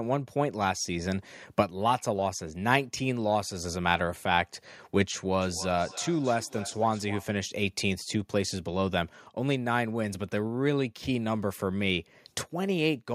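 From 5.41 to 7.36 s there is feedback echo between two devices: a second device in the room replays the call audio, this microphone picks it up, and the local echo canceller cannot remove it. The speech returns about every 300 ms, peaking about 15 dB below the direct signal.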